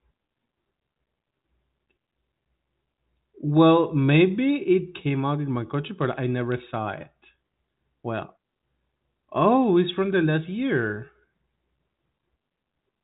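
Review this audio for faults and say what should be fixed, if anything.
Nothing in this audio needs to be fixed, as no faults can be heard.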